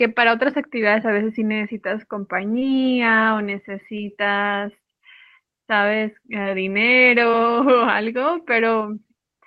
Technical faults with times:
2.59-2.63 short concealed packet loss
3.97-4.01 short concealed packet loss
6.43-6.47 short concealed packet loss
7.31-7.35 short concealed packet loss

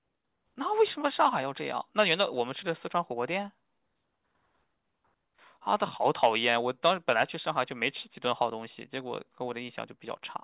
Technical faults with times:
none

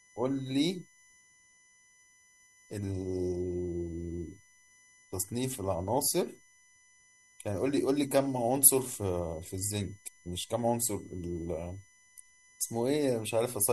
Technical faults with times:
0.00-13.72 USB whine

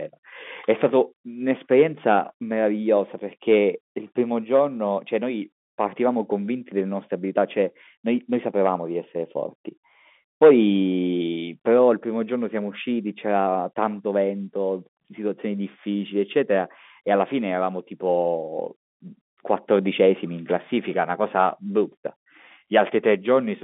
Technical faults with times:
none

